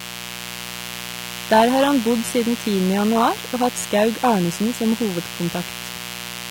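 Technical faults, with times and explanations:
Throughout, mains buzz: a steady, raspy buzz sits under the speech for the whole clip, at about 15 dB below it. It is built on a 60 Hz mains supply. Sharp switching spikes twice per cycle give a 120 Hz repetition with a dense series of harmonics climbing into the kilohertz range, which produces the rasp rather than a pure hum. This points to a dimmer, a rectifier or an unshielded line coupling into the signal path.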